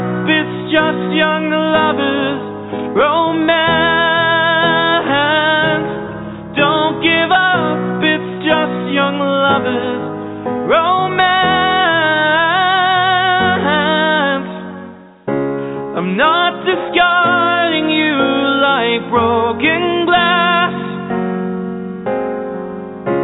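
No audible faults occur anywhere in this recording.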